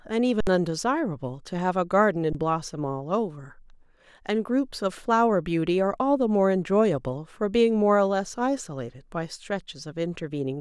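At 0.41 to 0.47 s, then 2.33 to 2.35 s (21 ms, fitting a 512-sample buffer), the speech drops out in an underrun with held sample: the converter holds its last value, so the waveform flattens and the spectrogram shows a blank column. Around 70 ms and 20 ms of audio are lost.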